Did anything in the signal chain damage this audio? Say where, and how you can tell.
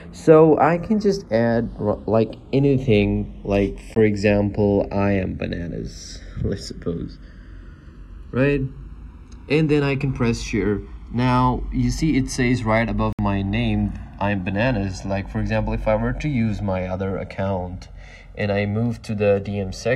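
Yes. The two channels are drifting apart throughout, a converter-clock issue: separate clocks around 70 ppm apart let the delay creep to roughly 1.5 ms, so in mono you get slow flanging.

There are also two short dropouts to dead silence, at 3.95 s and from 13.13 to 13.19 s. The audio resumes right after each gap, which points to a playback-side Bluetooth stall, likely from the headphone buffer running dry.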